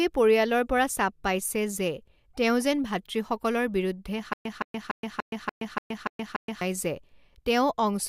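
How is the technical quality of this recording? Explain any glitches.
The speech has one glitch. From 4.33 to 6.61 s there is a stutter with silent gaps: a 168 ms fragment repeats eight times, separated by about 122 ms of dead silence. This is likely a stalled stream replaying its last buffer on each retry. The even 290 ms rhythm and true silence distinguish it from random dropouts.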